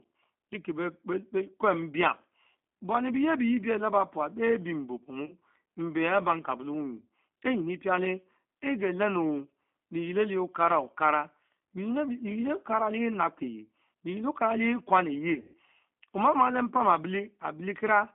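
The whole recording passed through the G.729 codec at 8 kbit/s, which rebuilds speech from a vocal-tract filter, a pitch predictor and a few pulses per frame. The line band runs about 200 Hz to 3.5 kHz, so the sound is thin, slightly rough and plainly synthetic throughout.

VoIP packet loss concealed by the speech codec strikes at 5.26 to 5.34 s, where 40 ms of audio goes missing, which fits two lost packets. The decoder extends its last pitch and filter at falling gain, so the sound briefly smears into a fading buzz or coloured noise. A heavier burst follows at 15.34 to 15.57 s, just before "omamah le": 160 ms lost across about 200 ms, with one run of 140 ms. That is long enough to hear a drawn-out buzzy tone or coloured noise sag away, and the voice stays weak or distorted for a moment after packets resume.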